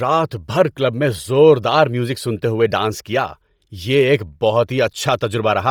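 Bluetooth LC3 compression runs throughout the speech, with heavy damage: the upper spectrum is partly zeroed and refilled with noise, giving a breathy, grainy edge, and nothing remains above 20.2 kHz. The likely cause is LC3 coding consistent with 32 kbps and 10 ms frames.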